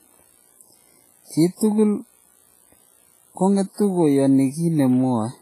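Throughout the speech, the sound rings and turns washy, with a hiss that swells and fades along with each phrase. This is heavy damage that likely comes from WMA compression at a low bitrate, which fits a setting of around 24 kbps. The transform encoder smears its quantisation noise across tens of milliseconds and discards weak components. On a spectrogram, the energy stops sharply at 15.4 kHz, and the harmonics show patchy, blocky holes, with smears before onsets.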